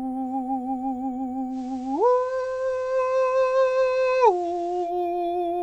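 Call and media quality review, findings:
Digital radio blending to analogue, 1.49–4.93 s: digital lost, 0.1 s cross-fade to FM; music about 1 dB quieter, faint hiss.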